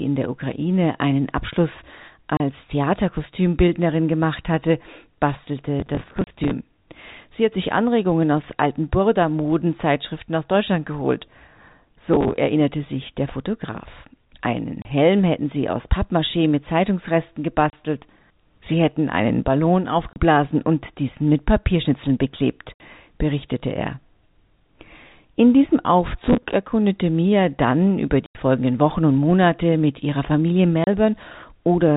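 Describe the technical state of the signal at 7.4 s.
At 7.4 s the speech is intact, with no fault at that moment, and it carries the narrow telephone bandwidth of the G.711 telephone coding it passes through.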